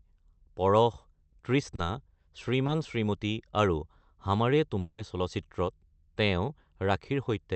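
At 1.75–1.80 s and again at 2.66–2.70 s, short concealed packet loss occurs: about 20 ms of the speech arrives too late each time, and the receiver fills the gap by extending the preceding sound for 30 ms and then 20 ms. Each one is heard as a brief smear or wobble.

From 4.80 to 5.00 s, a long network dropout is the likely cause of about 180 ms of missing speech. The gap is filled entirely by a fading continuation of the last sound, with no silence, before normal speech resumes.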